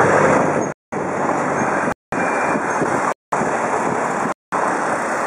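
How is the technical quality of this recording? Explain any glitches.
The recording is broken by a gap between chunks, four times. Silent holes run from 0.72 to 0.92 s, 1.92 to 2.12 s, 3.12 to 3.32 s and 4.32 to 4.52 s, each 200 ms long. They come after every 1.0 s of audio because silence is left at each chunk boundary. Unlike a dropout, no sound is lost; it resumes exactly where it stopped.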